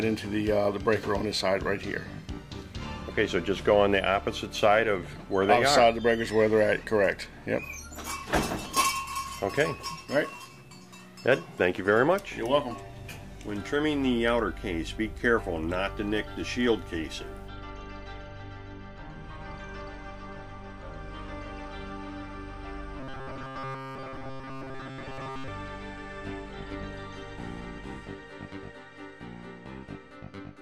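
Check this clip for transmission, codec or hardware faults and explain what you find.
One fault is audible. From 23.00 to 25.48 s the sound turns into a rigid, metallic buzz locked at 133 Hz, typical of robotic sound from repeated short buffers. Audio was likely arriving too seldom, so short chunks, which fits a buffer of about 7.5 ms, were replayed in place of about 70 percent of the real signal.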